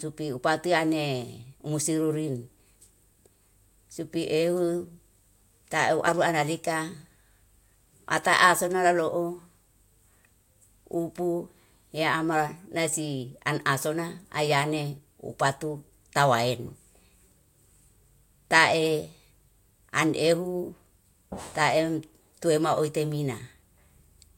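No technical faults can be heard anywhere in the recording.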